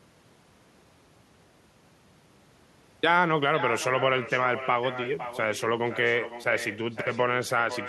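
Throughout the speech, an echo with no canceller trails every phrase by about half a second, roughly 11 dB quieter and thinner, returned from a far-end loudspeaker.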